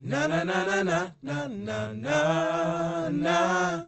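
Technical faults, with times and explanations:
No technical faults can be heard in this clip. It has passed through a WebRTC call path, and its top end stops at about 8 kHz, which fits an Opus call codec set to that bandwidth.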